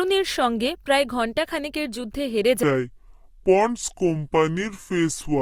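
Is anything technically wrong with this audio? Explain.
Yes. From 2.63 s to the end at 5.4 s, there is a section at the wrong speed. The likely cause is an editor or player running this part against the wrong clock, so it plays back at 0.679 times the recorded speed. Because speed and pitch move together, the speech from that point drops to roughly seven semitones lower and sounds deep and drawn out, with the change arriving abruptly rather than gradually.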